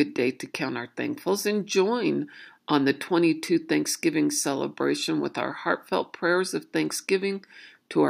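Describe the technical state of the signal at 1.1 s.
At 1.1 s the speech signal is intact, with no dropout, clipping, distortion or other fault audible at that moment.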